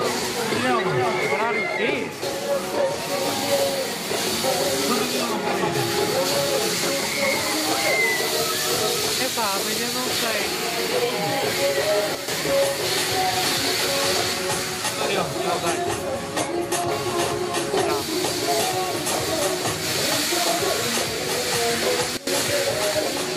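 Sudden gain jumps at 12.15 to 12.28 s and 22.17 to 22.27 s drop this audio, background noise included, by about 8 dB and then about 16 dB, likely from digital gain switched without a ramp.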